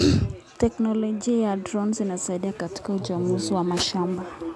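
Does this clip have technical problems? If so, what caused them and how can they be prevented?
Yes. This speech has aliasing throughout: the audio was resampled to a lower rate without an anti-aliasing filter, which fits a conversion from 44.1 kHz down to 24 kHz. Content above the new 12 kHz limit folded back below it as false, unrelated frequencies, roughly 30 dB under the speech. The result is gritty, metallic sibilants and a spectrum that runs hard up to 12 kHz. To prevent it, low-pass filter below half the target rate before downsampling.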